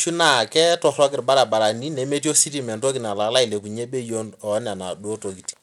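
From start to finish, the speech carries plainly audible coding damage, most likely Bluetooth SBC compression working with a small bit pool, which fits a low rate of about 96 kbps. Starved upper sub-bands lose their treble or let it flicker on and off, and the coarse quantising leaves a gritty noise with aliasing on the sound. A spectrogram would show the top bands dropping out in patches, with grainy speckle across the rest.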